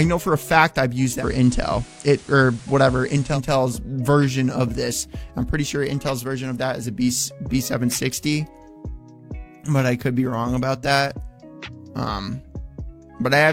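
From 1.15 to 3.39 s the audio shows digital radio blending to analogue: a 103 ms cross-fade to FM brings hiss some 25 dB down and a level shift of about 1 dB. Unlike a codec bandwidth drop, hiss arrives with the switch.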